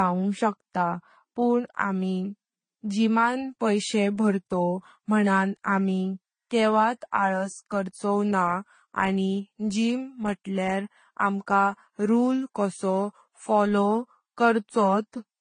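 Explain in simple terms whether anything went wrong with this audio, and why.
Yes, for the whole length of this speech clip the sound has a dull quality. Nothing is heard above about 10 kHz. The likely cause is transcoding between lossy codecs: the audio was squeezed by one compression format, which fits AAC, then squeezed again, consistent with Vorbis. The second format wasted effort re-encoding the first one's damage and added its own, so both sets of artefacts are heard together.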